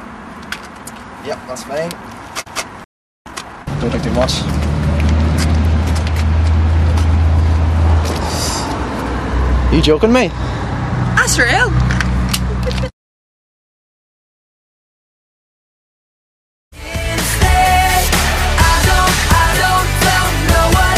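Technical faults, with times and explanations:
2.84–3.26 s, playback stall: The player most likely ran out of buffered data or had its output thread blocked, so nothing reached the output for about 0.42 s. The sound cuts off mid-flow into silence and then resumes once the player recovers.
3.26–4.08 s, time-compressed catch-up: To clear the backlog left by the stall, the player cuts out small pieces of audio and cross-fades across the joins. For about 0.8 s the sound runs at 1.5 times normal speed while keeping its normal pitch, so it comes across as hurried.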